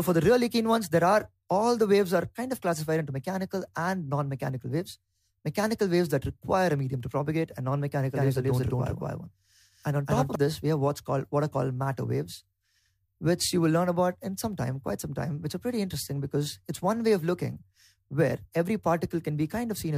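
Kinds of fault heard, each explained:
Doubled audio track, 8.2 to 10.4 s: a second full-band copy of the sound runs about a fifth of a second behind the first, at roughly the same loudness. It cuts in and out abruptly, with no decay tail or added room colour, so it reads as a clean, echo-like repeat. This likely comes from the audio being captured again through a slower path, or an edit leaving two copies out of step.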